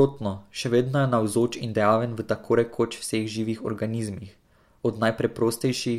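No technical faults can be heard in the recording, so there are none to place in time order.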